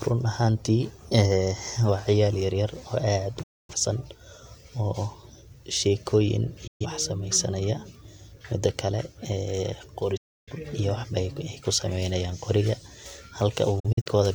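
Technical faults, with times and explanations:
3.43 to 3.74 s: digital broadcast dropout. The receiver lost valid frames and muted. The sound fades out over 8 ms, leaving a 256 ms silence, which fits six lost frames.
6.67 to 6.86 s: digital broadcast dropout. A shorter mute follows the same 8 ms fade. About 128 ms of audio is missing, consistent with three failed frames.
10.17 to 10.53 s: digital broadcast dropout. This is the longest silence, about 300 ms, after an 8 ms fade. Everything transmitted during the gap is lost.
13.80 to 14.15 s: digital broadcast dropout. Here the mute breaks into several short holes across 341 ms, none longer than 43 ms. This sounds like intermittent frame errors.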